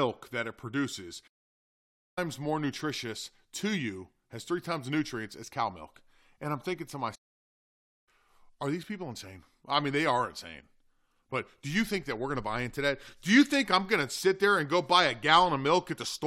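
The speech cuts to silence at 1.27 s and 7.15 s for about 0.9 s each, then resumes: playback stalls, likely from the player running out of data or being blocked.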